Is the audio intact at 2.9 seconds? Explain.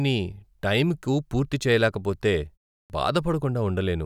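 No, not quite. Right around 2.83 to 2.90 s there's a clipped start after a pause. After "టైంకు పూర్తి చేయలేకపోతే" there's a gap of about 0.34 s, and the output path seems to nod off in that silence. When the next bit of speech arrives it needs a moment to wake back up, so roughly 69 ms of the onset gets swallowed. You hear the next word pop in abruptly, missing its first sounds.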